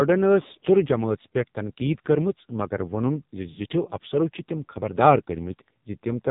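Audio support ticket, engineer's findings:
Speech through AMR narrowband mobile codec, whole clip. Nothing above 4 kHz, voice buzzy and synthetic, heavy codec damage. Sounds like a low AMR-NB mode, around 6 kbps, so the vocal-tract model plus sparse pulses per 5 ms subframe leaves little detail. Probably a mobile leg in the chain.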